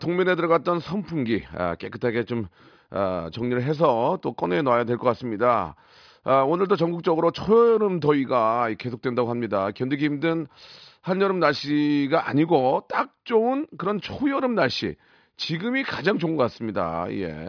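Speech recording with no technical faults to report.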